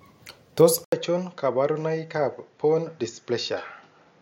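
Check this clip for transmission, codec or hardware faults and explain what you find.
There's one fault here. At 0.84 s the sound cuts out for about 80 ms, and from then to the end it comes back duller and about 5 dB quieter, with nothing above 7.1 kHz and faint new background noise well under the speech. That pattern points to an input switched to a poorer device, likely a different mic or headset profile taking over mid-recording. Its narrower band, lower gain and own noise floor change the tone at once.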